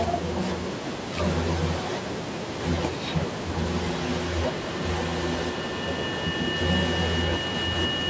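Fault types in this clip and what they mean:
Feedback howl: from 3.72 s a whistle around 3 kHz, with repeats every fifth of a second, builds as a microphone-loudspeaker loop gains level each pass.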